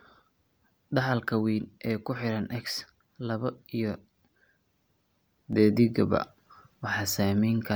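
A gain setting was likely applied without a ramp at 5.53 s, a sudden gain jump of about 6 dB, so the speech and background noise step up together until the end.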